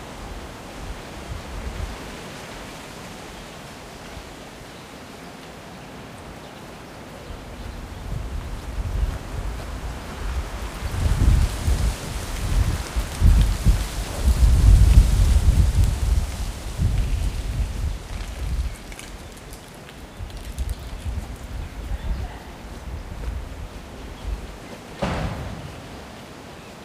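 Drift correction step, 17.69 to 19.13 s: the sound slows 5.3% and sinks nearly a semitone (94 cents), then snaps back, likely from a clock-matching playback-rate change.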